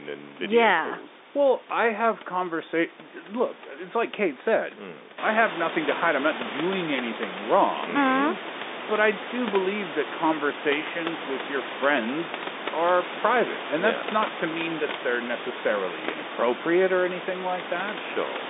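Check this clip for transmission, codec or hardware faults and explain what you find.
No transmission, codec or hardware faults turn up in this clip.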